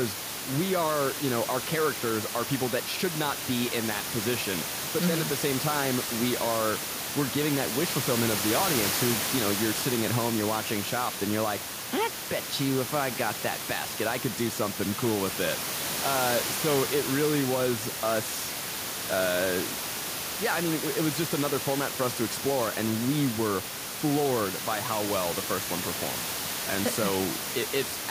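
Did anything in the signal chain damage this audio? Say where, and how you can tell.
No, nothing along the signal chain has damaged this speech recording. A steady room noise sits about 8 dB below the speech, and it belongs to the space around the microphone rather than to any stage of the system.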